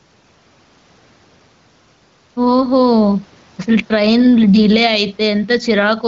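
Gain pumping runs through the whole of this speech clip. The level keeps breathing: the gain drops by around 10 dB the moment the talker gets loud again, while the faint room noise sits far below the speech. The likely cause is input gain set far too high, with a fast limiter or compressor clamping down on every loud syllable. Loud and quiet passages end up squeezed toward the same level, so the speech sounds flattened and crowded.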